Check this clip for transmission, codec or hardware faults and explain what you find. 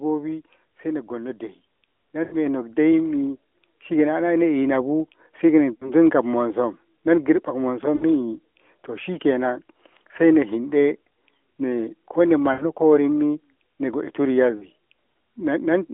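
One transmission fault recurs five times: lost AMR speech frames, at 2.24–2.36 s, 5.74–5.91 s, 7.96–8.05 s, 12.54–12.64 s and 14.58–14.68 s. Bit errors on the radio link made frames fail their checksum, so the decoder held the last good pitch and vocal-tract settings while ramping the gain down. Each gap sounds like a short smeared, fading stretch of speech. The longest, about 80 ms near 2.2 s, fits a run of four 20 ms frames. Speech returns briefly weak or rough after each gap. The AMR narrowband path itself is audible as band-limited telephone speech, consistent with the 12.2 kbps mode.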